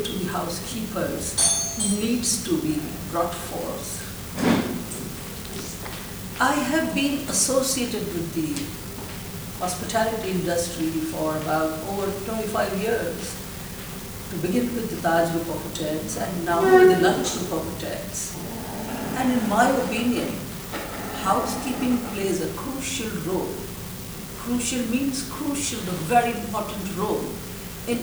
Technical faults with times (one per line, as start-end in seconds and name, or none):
0.00-28.02 unreliable data bit